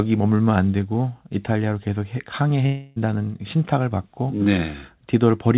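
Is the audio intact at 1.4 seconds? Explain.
Yes, the audio is intact at 1.4 seconds: there is no dropout, glitch or distortion, and only the narrow telephone band of the call path, with nothing above 4 kHz.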